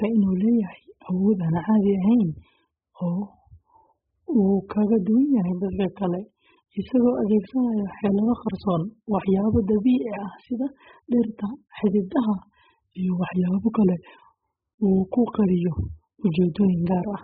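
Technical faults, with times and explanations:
Throughout: AAC compression. Nothing is heard above 5 kHz, so the speech sounds dull and muffled. Heavy damage gives vowels a smeared, warbling texture and sibilants a fizzy edge. This likely comes from AAC-LC coding at a very low bitrate, consistent with about 8 kbps.
16.55 s: pre-echo. A short hiss comes about 10 ms before a sharp attack, and the attack itself sounds softened. The codec spreads its quantisation noise across the whole block, so noise sized for the loud onset leaks into the quiet moment before it.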